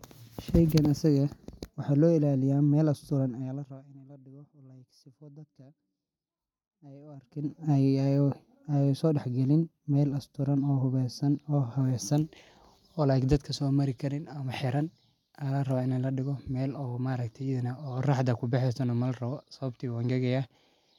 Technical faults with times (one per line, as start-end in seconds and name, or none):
3.27-4.06 zipper noise
7.07-7.56 zipper noise